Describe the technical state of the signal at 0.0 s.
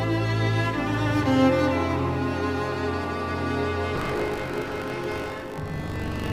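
At 0.0 s the signal is intact, with no technical fault present.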